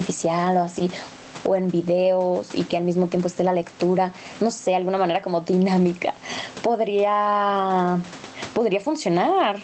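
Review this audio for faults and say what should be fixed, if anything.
Gain pumping runs through the whole clip. The gain swings by around 20 dB. The likely cause is microphone gain set far too high, with a fast limiter clamping every peak. Lower the input gain so the limiter rarely engages.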